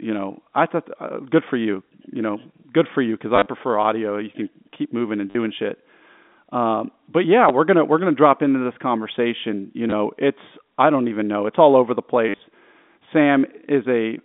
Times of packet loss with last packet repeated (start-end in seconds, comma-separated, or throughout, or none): 3.36-3.46, 5.30-5.35, 7.49, 9.90, 12.29-12.39